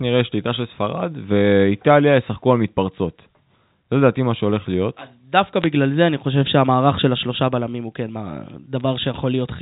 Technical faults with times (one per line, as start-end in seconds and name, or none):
5.62-5.66 bit errors on a digital phone line
8.80 bit errors on a digital phone line